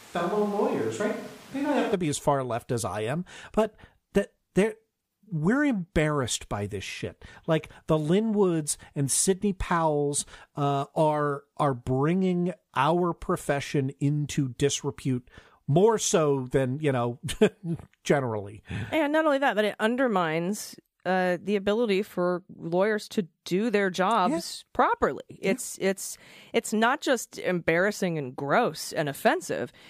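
From the start of the clip until 1.93 s, the sound is hollow and roomy, with thin bass. Background noise sits at roughly 25 dB below the speech. The level stays about the same. At 1.93 s the sound switches abruptly to a close, full tone, just before "be as far left". This is a switch to a distant microphone. The close microphone's signal was likely missing, so a microphone further away was used for that first stretch.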